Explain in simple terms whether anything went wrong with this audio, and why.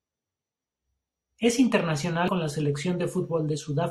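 Damaged data in a compressed stream, at 2.28 s: a tiny piece of the stored speech file was corrupted. The decoder couldn't make sense of those bytes, lost its place, and hunted for the next readable chunk, so you hear a brief chirp or blip.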